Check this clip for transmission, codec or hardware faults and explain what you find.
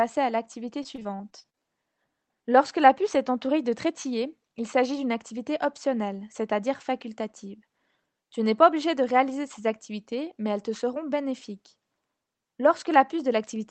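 One transmission fault turns up. From 0.83 to 1.60 s, just after "à l'activité", the speech turns choppy. This is repeated packet loss: eleven short gaps, the longest 38 ms, each patched by stretching the previous sound. The call codec's top end stops at 8 kHz.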